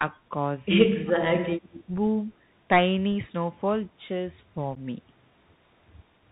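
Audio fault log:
throughout, Bluetooth CVSD headset codec: a narrowband delta-modulation link, fitting 64 kbps CVSD, cuts everything above 4 kHz, making sibilants scratchy over a plainly audible granular hiss.
0.89–1.9 s, speech suppressed in double talk: the echo canceller likely confused the talker with echo and ducked them, dipping the speech by up to about 30 dB for about 0.7 s in total.
1.62–1.84 s, echo leak: the far side's echo canceller likely let residual loudspeaker pickup through, so a copy of the speech returns 223 ms late, about 20 dB below the main speech.
4.75 s, unconcealed Bluetooth headset packet loss: a few headset packets dropped and nothing replaced them, leaving an abrupt 11.2 ms hole with hard edges before the speech resumes.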